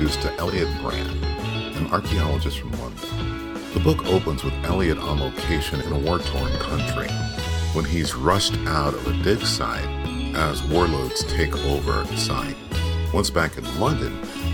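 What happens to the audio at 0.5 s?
Frames out of order occur from 0.47 to 0.53 s. Two adjacent blocks of roughly 23 ms each were swapped before decoding, so that short stretch plays its halves in reversed order. It comes across as a brief garbled flutter, and no time is lost.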